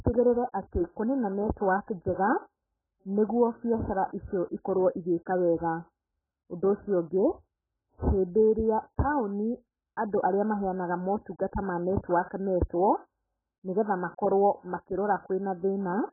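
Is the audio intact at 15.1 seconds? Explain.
No. At 15.1 seconds, as across the whole clip, the speech carries heavy AAC compression damage, likely from AAC-LC at a very low bitrate, which fits something around 8 kbps. Starved of bits, the encoder discards everything above 1.7 kHz and coarsely quantises what remains, so the audio sounds dull, muffled and smeared, with a warbling, watery texture. A spectrogram shows a flat ceiling at 1.7 kHz and patchy gaps below it.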